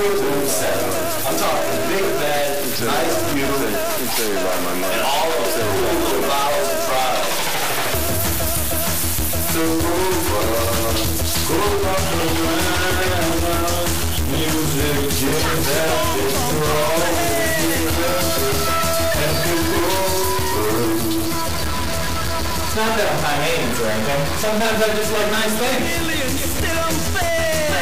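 A harsh, buzzy distortion runs through the whole recording, grinding along with the waveform, and even the quieter stretches are filled with a steady rough noise floor instead of falling silent. This points to a stuck bit, likely from a broken data line or converter. One bit is held fixed, so about half the samples are shifted by its weight, here a step of roughly minus 20 dBFS. Because that bit sits high, the noise it adds to low-level passages is clearly audible.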